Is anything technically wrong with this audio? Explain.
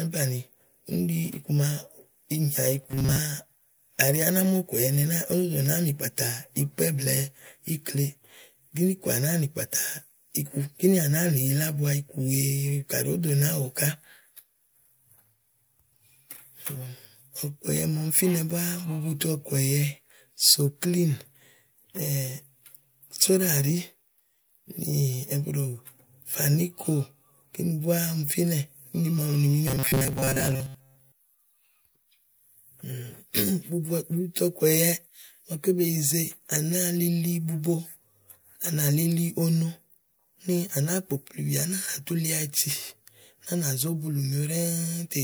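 Yes. This speech has robotic sound from repeated short buffers, from 2.82 to 3.19 s and again from 29.68 to 31.39 s. Both passages turn into a rigid metallic buzz pinned near 134 Hz. The likely cause is a starved buffer looping its last 7.5 ms or so for most of each stretch. Unlike a stutter, where longer chunks repeat audibly, the loop is too short to hear as repetition and fuses into a fixed pitch.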